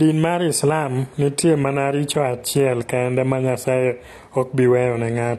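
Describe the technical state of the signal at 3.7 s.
At 3.7 s the speech carries AAC compression damage that runs through the whole clip, likely from AAC-LC at a low bitrate in the region of 32 kbps. With so few bits per frame, the encoder quantises its frequency lines coarsely and discards the top band, so nothing survives above 12.1 kHz. The result is plainly audible: a dull, smeared tone with a warbling, fizzy texture on sustained sounds and sibilants.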